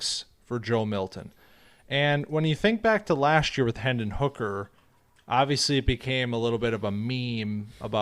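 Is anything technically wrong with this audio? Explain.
No, nothing technically wrong turns up anywhere in this speech recording.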